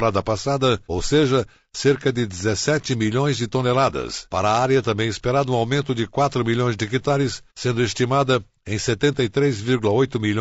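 Throughout the speech, the signal has likely passed through low-delay AAC compression of the AAC-ELD kind, at a rate that fits about 32 kbps. Its short frames resolve pitch harmonics poorly, so voices come out plainly rough and grainy, with noise filling between harmonics.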